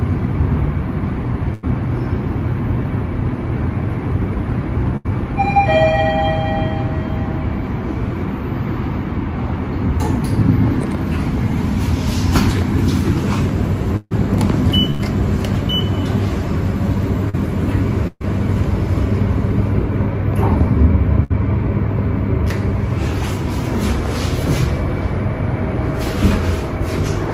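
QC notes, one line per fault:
1.53, 4.97, 13.97, 14.91, 18.07, 21.24 s, burst of packet loss: packets arrived too late or never, so the receiver continued the last sound for 60 to 140 ms, fading it to a buzz or hiss before the audio resumed further on.
17.29 s, short concealed packet loss: about 40 ms never reached the decoder in time, so it was filled from the preceding sound and blended back, heard as a brief smear.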